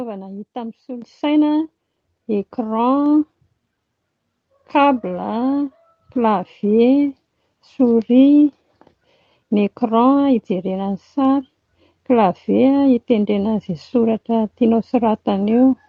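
The microphone volume was stepped up twice, in single jumps: at 1.02 s the input level rises by about 9 dB, and at 6.12 s by about a further 3 dB. Automatic gain control raised the device's gain abruptly rather than ramping it, so speech and background noise get louder together at each instant. The first step is a lurch in loudness and room noise. The second is smaller, all heard through a call codec path limited to about 8 kHz.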